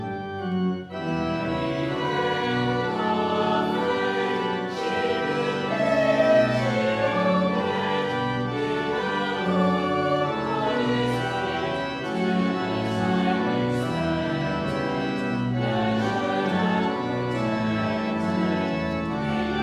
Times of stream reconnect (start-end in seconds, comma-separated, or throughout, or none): none